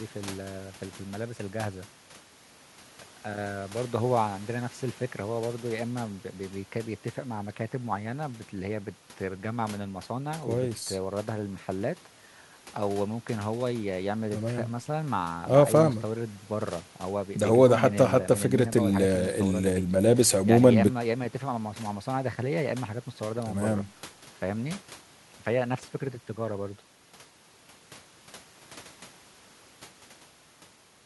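No technical faults can be heard anywhere in the speech. There is no moment in the audio where anything goes wrong.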